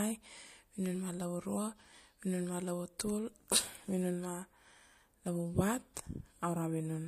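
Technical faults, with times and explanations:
5.94 to 5.96 s, pre-echo: the codec stayed on a long transform block, consistent with one of about 36 ms, instead of switching to short blocks. Noise sized for a sharp attack therefore leaks 21 ms ahead of it as a hiss about 14 dB up, smearing the onset.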